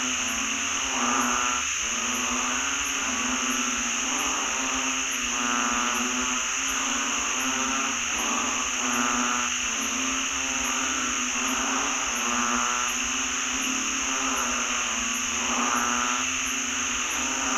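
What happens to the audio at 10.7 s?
Nothing goes wrong at 10.7 s; the audio runs through that moment intact, with no dropout, click or other fault.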